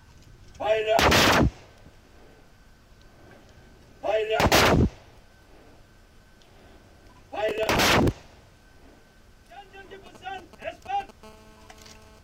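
From 7.49 to 8.21 s there is processor overload crackle. The processor repeatedly misses its buffer deadlines, and each miss replays a fragment of old audio with hard edges. The result is a gritty tearing over the sound, consistent with very short buffers of a few milliseconds failing one after another.

GSM signalling bursts follow from 10.06 to 11.11 s. A nearby 2G phone is exchanging brief control transmissions, which the audio circuit rectifies into a galloping pattern of short 217 Hz buzzes. The pattern sits roughly 25 dB below the signal.

From 11.23 to 12.19 s, GSM phone buzz takes over as the phone settles into a call and transmits continuously at 217 bursts per second. The rectified pulses produce a steady, raspy 217 Hz buzz rich in harmonics, about 30 dB below the signal and unrelated to it.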